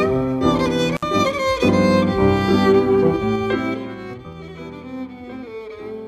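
At 0.94 s an intermittent contact breaks the signal path: a loose cable or plug opens for about 58 ms, and the sound drops out between crackles at either edge before returning by 1.03 s. On the waveform this shows as a short near-flat gap framed by spiky transients. On a spectrogram the crackles are thin vertical broadband streaks, with only faint low-level hiss filling the space between them.

From 3.07 s to 4.37 s there is zipper noise. The level is pulled down by about 20 dB in 3 dB jumps rather than a continuous ramp, at around five steps per second. Each unsmoothed jump leaves a small click, so a rhythmic ticking rides on the sound as it fades. The waveform envelope descends like a staircase instead of a slope, and the spectrogram shows faint evenly spaced vertical lines across the fade.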